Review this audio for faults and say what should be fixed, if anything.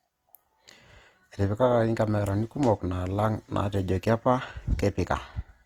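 Opus compression damage runs through the whole speech clip. The tone is grainy, rough and noisy rather than swirly. This is likely the Opus music mode, CELT, starved of bits. It keeps each band's energy but fills thin bands with folded or noise-like content, so detail turns to grain. Bandwidth stays full, with nothing above 20.3 kHz. The damage is plainly audible, which fits a bitrate around 24 kbps. To prevent it, encode at a higher bitrate or keep a lossless master.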